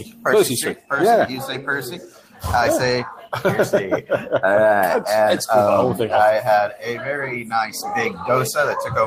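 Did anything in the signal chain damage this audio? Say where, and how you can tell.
No, none of the stages between capture and playback left any audible damage on this audio.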